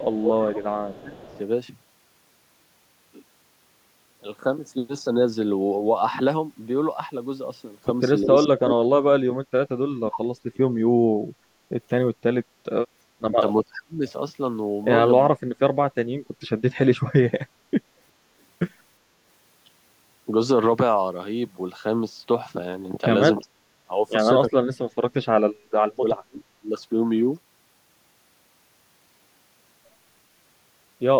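From 0.00 to 0.09 s and again from 0.93 to 1.39 s there is an echo leak: a faint delayed copy of the speech trails the original by 363 ms, roughly 25 dB below it. The likely cause is a far-end echo canceller on a loudspeaker setup that let part of its microphone pickup through. On a spectrogram, the harmonic pattern reappears weakly 363 ms later, as a thin ghost of the main speech traces.

Between 0.09 and 1.29 s the speech suffers speech suppression in double talk, dipping by around 20 dB for about a second in total. The likely cause is an echo canceller that could not separate talker from echo while both sides spoke and attenuated everything. The same suppression returns more deeply, around 40 dB, at 8.47–10.62 s, 13.20–14.03 s, 15.26–17.42 s, 23.42–23.90 s and 24.52–26.71 s, so the speech drops out in pieces. On the waveform the envelope collapses in sudden notches, and on the spectrogram energy vanishes across the band.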